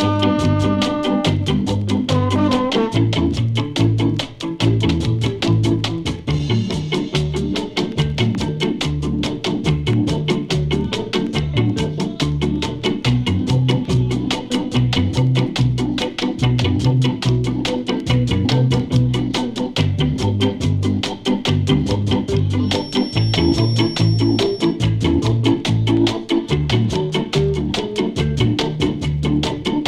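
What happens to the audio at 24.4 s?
A speaker-to-microphone loop likely near the feedback edge rings a feedback whistle from 22.57 to 24.80 s, a thin 5.5 kHz tone about 15 dB under the sound.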